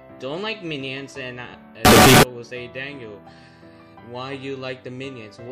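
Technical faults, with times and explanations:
1.85–2.23 s, signed and unsigned mixed up: a sudden burst of loud, harsh distortion, likely from 16-bit samples read with the wrong sign convention, flipping each sample's top bit.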